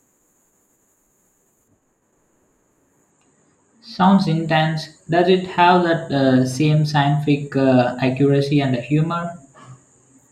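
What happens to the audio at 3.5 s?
At 3.5 s you're inside a stretch of de-emphasis applied wrongly, running from about 1.68 to 4.04 s. A treble cut meant to undo pre-emphasis hits speech that either never had any or had already been de-emphasized, sloping off to about 11 dB down at 10 kHz, so it sounds dull and muffled.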